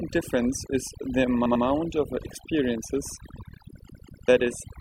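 Overdone noise removal runs throughout, stripping bands near the noise floor; the spectrogram shows gaps and isolated twinkling specks. Repeated frames stutter from 1.46 to 1.65 s, where a 96 ms block plays twice more, and from 3.89 to 4.27 s, where a 192 ms block repeats twice. The waveform shows identical copies.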